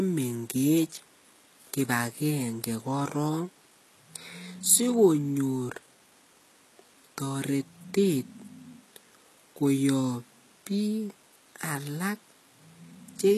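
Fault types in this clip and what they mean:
HE-AAC compression: The speech carries plainly audible coding damage throughout. The treble sounds synthetic, s sounds come out gritty and lispy, and nothing survives above 12.4 kHz. The likely cause is HE-AAC at a rate that fits about 16 kbps. That coder keeps only the lower spectrum and fakes the upper band by copying lower bands upward under a coarse envelope, so the rebuilt harmonics do not line up with the real ones.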